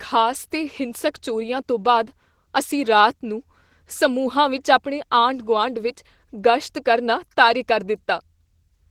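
From start to finish the speech sounds hoarse and faintly robotic, with a grainy, slightly muffled quality and a thin, smeared top end: plainly audible Opus voice compression. The low band is rebuilt from a linear-prediction model whose excitation is coded coarsely, while a transform layer codes the upper frequencies sparsely. The damage points to Opus in hybrid mode at a low bitrate, consistent with about 16 kbps in 20 ms frames.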